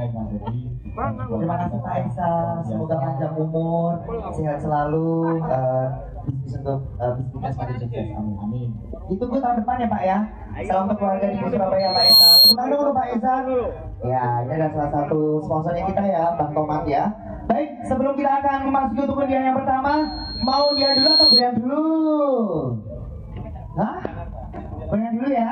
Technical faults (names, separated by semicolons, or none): loudspeaker feedback squeal